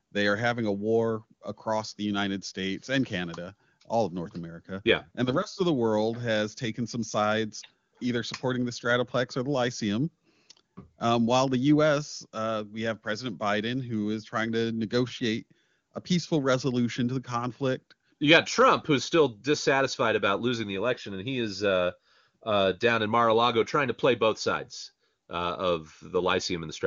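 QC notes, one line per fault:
Nothing here needs a QC line; it's just speech carried over an AMR wideband (HD Voice) link, with the top end stopping at about 7 kHz as that codec does.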